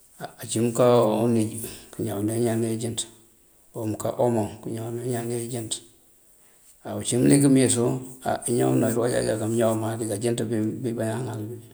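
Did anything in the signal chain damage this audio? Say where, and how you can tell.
No, nothing damaged it.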